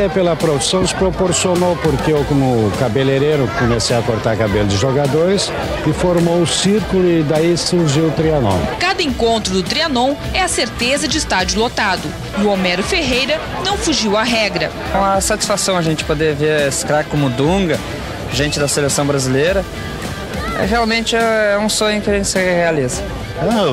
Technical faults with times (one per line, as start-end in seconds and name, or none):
none